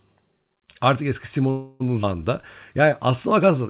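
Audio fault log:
1.50–1.82 s, call audio freeze: for about 0.3 s the last sound before the break is carried on as a buzz or hiss that weakens but never drops to silence. The speech then resumes exactly where it stopped, so nothing is lost and the rest of the clip simply runs about 300 ms later. This is likely packets held up in transit, leaving the jitter buffer empty while the receiver improvised sound to fill the wait.
2.02–2.05 s, skip ahead: the speech jumps forward abruptly, dropping about a tenth of a second of audio. Only a few milliseconds of filler bridge the join, so the two sides butt almost directly together with little or no gap. Here later audio was already queued and the stretch in between was dropped, pulling the delay back by about 100 ms.
2.85–3.59 s, jitter buffer slow-down: this stretch plays at about 94% speed with no change in pitch, so sounds come out slightly drawn out. 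Across the passage the receiver repeated single pitch periods or small slices of pause many times in a row, adding 53 ms in total. It does this to rebuild a reserve in a jitter buffer that was running low or had just raised its target delay, stretching the audio it already holds while waiting for more. The whole clip also carries the 4 kHz band limit of the call's G.711 codec.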